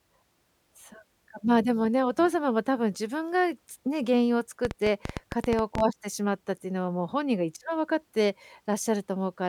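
A train of clicks runs from 4.65 to 5.81 s: around fifteen sharp pulses at about 10.4 per second, spaced unevenly and rising roughly 15 dB above the surrounding speech. They are heard as a rapid, irregular ticking laid over the talker. The likely cause is an outside source repeatedly injecting near-identical pulses into the signal path, such as interference from nearby equipment or a faulty connection or power supply.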